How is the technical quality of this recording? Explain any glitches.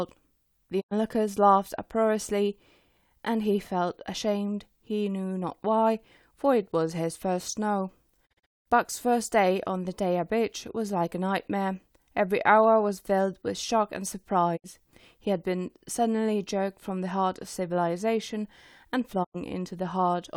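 The speech carries four digital broadcast dropouts, at 0.80–0.93 s, 8.25–8.68 s, 14.56–14.66 s and 19.23–19.36 s. Each time the receiver lost valid frames and muted, fading out over 20 ms. The 8.25 s dropout breaks into several short holes, the longest 0.19 s.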